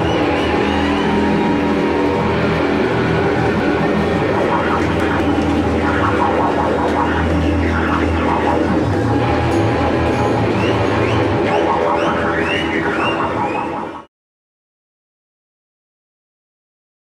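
The audio has two spots where chunks play out of order. Between 3.2 and 3.8 s, a 200 ms chunk arrives two chunks late. Between 4.8 and 5.2 s, another arrives one chunk late. Each jumbled moment has three hard joins. Unlike a dropout or a stutter, nothing is missing or repeated: all the material is there, just in the wrong sequence.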